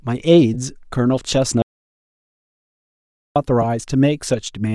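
Throughout the speech there is a breathy, grainy edge on the upper frequencies, the sign of Bluetooth LC3 compression. This transform codec works in 10 ms frames, and at the rate this sounds like, roughly 48 kbps, it likely discards much of the upper spectrum and replaces it with shaped noise. Unlike ordinary hiss, this graininess is tied to the signal, rising and falling with each syllable rather than sitting steadily underneath it.

From 0.54 to 0.57 s, lost LE Audio frames leave a brief noisy smear of about 20 ms, consistent with two 10 ms frames. The decoder repeats the previous spectrum with randomised phase, so the sound is briefly held and blurred instead of breaking. That separates it from a dropout: the gap is filled with a hazy echo of what came before, not silence.

From 1.62 to 3.36 s the audio drops out to silence for about 1.74 s. It cuts off abruptly mid-flow and returns just as suddenly. 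The gap is silent with no room tone, which points to the input being lost, likely through a broken link or a mute, while recording continued. Unlike frame concealment, nothing is filled in or faded, and whatever was said in that stretch is gone.

A second lost LE Audio frame at 3.62 to 3.65 s produces the same short smear, about 10 ms, matching one frame.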